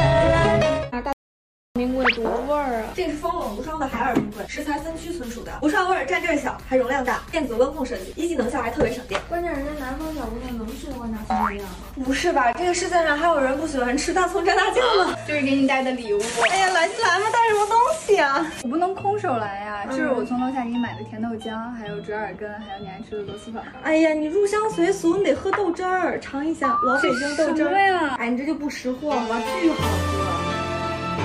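The input feed was likely interrupted for a moment while the recorder kept writing silence, producing an audio dropout to silence from 1.13 to 1.76 s. The sound cuts off abruptly into dead silence with no room tone, and about 0.63 s of material is simply missing.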